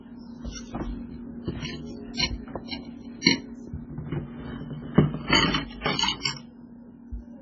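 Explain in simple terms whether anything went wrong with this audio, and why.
MP3 compression damage runs through the whole clip, from the first second to the last, and it is heavy. The sound is dull and watery, with nothing above about 7.4 kHz, the likely cause being an MP3 encoder squeezed for space. To save data it chops off the treble at a fixed point and drops quieter details, which flicker in and out from moment to moment, giving a swirly, metallic texture and blurred sharp onsets.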